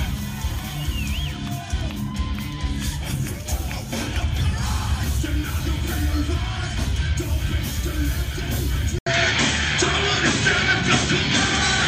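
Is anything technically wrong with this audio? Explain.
Yes. At 8.99 s the sound drops out for 80 ms, then returns duller and boxier through to the end, with nothing above 8.2 kHz, a level shift of a few decibels and a faint new background hiss. This is likely an input switched to a poorer device. A narrower-band microphone or headset path has replaced the original one. On a spectrogram the upper band cuts off abruptly at the switch. The waveform shows a brief flat gap, followed by a changed envelope and a raised noise floor.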